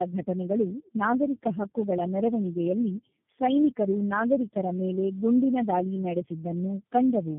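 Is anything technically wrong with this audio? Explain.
Yes. Throughout the speech there is tandem speech coding: the call passed through four low-rate speech codecs in a row, each re-encoding the previous one's degraded output. The result sounds rough, muffled and warbly, with nothing above 3.5 kHz.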